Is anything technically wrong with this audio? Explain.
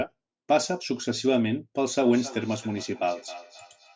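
Yes. From 2.02 s to the end, there is feedback echo between two devices. A second device in the same room replays the call audio into the first microphone, and that device's echo canceller ignores it. The speech returns at roughly 300 ms intervals, about 18 dB below the direct sound. Unlike room reverberation, these are distinct, evenly spaced repeats rather than a smooth decaying tail, and each one sounds thinner and more ringing than the original, within the call's normal band that stops at 8 kHz.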